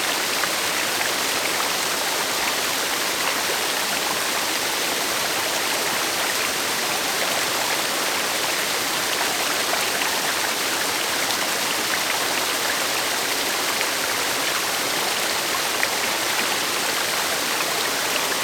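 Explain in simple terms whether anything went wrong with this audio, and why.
Nothing went wrong with this audio: there are no dropouts, glitches or distortion anywhere in it.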